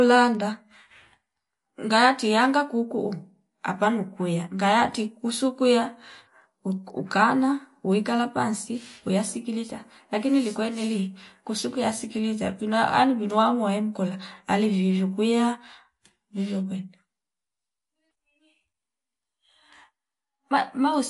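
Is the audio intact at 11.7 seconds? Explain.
No. At 11.7 seconds, as throughout the speech, the sound is watery and swirly, with smeared attacks and nothing above 11.2 kHz. This is likely MP3 compression at a low bitrate, near 48 kbps, cutting the treble and switching weak frequency lines on and off between frames.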